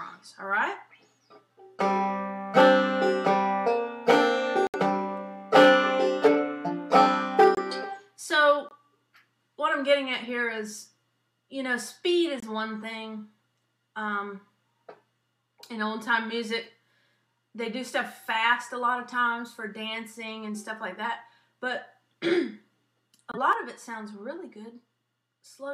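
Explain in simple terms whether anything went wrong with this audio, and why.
Yes, two things went wrong. First, some of the compressed data was damaged, so the decoder rejected those chunks and the player filled each one with silence. That is a corrupt frame muted fault. You hear it as brief, abrupt dropouts at 4.67 to 4.76 s, 7.55 to 7.59 s, 8.69 to 8.73 s, 12.37 to 12.44 s and 23.32 to 23.38 s. Each gap lasts under a tenth of a second, and the timing carries on unchanged afterwards.

Second, at 23.53 s the overall volume steps down instantly and stays lower until the end. The likely cause is a level setting being applied all at once, with no gradual fade. That is a sudden gain jump. Because the whole signal is scaled together, the background noise drops along with everything else. The change is a plain step in loudness rather than a smooth fade.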